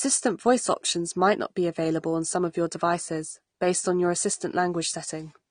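Throughout the speech, nothing reaches above 9.7 kHz, and sibilants carry a fizzy, warbling smear, the likely result of AAC compression at a rate that fits about 32 kbps. Unlike a plain low-pass filter, it also leaves holes or substitute noise within the remaining spectrum.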